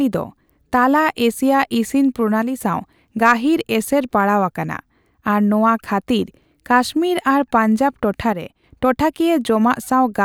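At 2.42 to 2.61 s and again at 8.33 to 8.64 s, the speech abruptly drops about 6 dB and then snaps back. This is most likely one channel dropping out: with one side missing from the mono sum, only half the shared signal remains.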